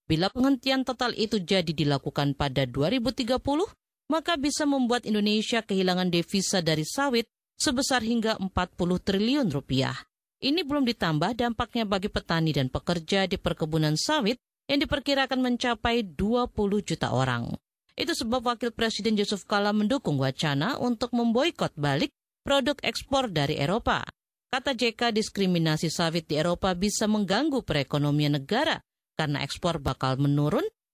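Nothing technically wrong turns up anywhere in this audio, so there's no fault to point to and no cause to explain.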